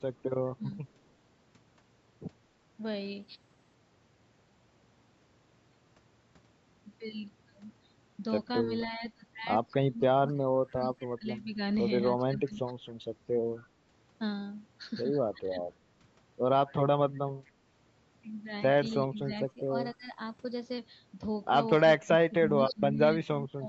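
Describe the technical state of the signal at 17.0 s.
A faint, delayed copy of the speech trails the original by about 246 ms, far below the direct voice, from 16.82 to 21.82 s. This is an echo leak, likely a far-end loudspeaker's sound that the echo canceller failed to fully remove before it was sent back.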